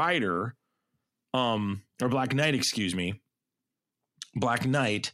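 A Bluetooth SBC bit pool drop hits this speech recording from 4.22 s to the end at 5.14 s, as the link apparently came under congestion and the sender cut its bit allocation. The loss of quality fits a fall in bit pool from 31 to 15, or around 105 kbps. Starved of bits, the upper sub-bands go nearly empty and the remaining bands are coarsely quantised, so the treble turns dull and a gritty noise rides on the sound through to the final moment.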